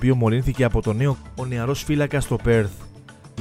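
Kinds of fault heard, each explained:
Damaged data in a compressed stream: part of the encoded stream reached the decoder corrupted, so it misread the frames there, lost sync and had to hunt for the next valid frame header. This breaks the sound at 1.15 s as a brief chirp or blip.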